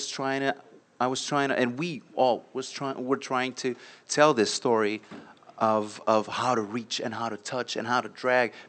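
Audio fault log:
No faults heard in this speech recording.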